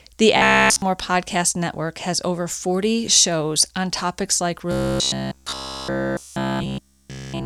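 Audio likely arrived too seldom, so playback kept looping one roughly 15 ms buffer in place of the real signal. This robotic sound from repeated short buffers is a rigid, metallic buzz near 67 Hz, from 0.37 to 0.82 s and again from 4.72 to 7.46 s, after "shows on topics like".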